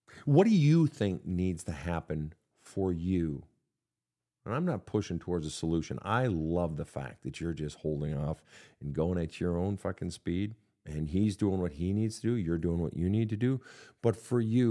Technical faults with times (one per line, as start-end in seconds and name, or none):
none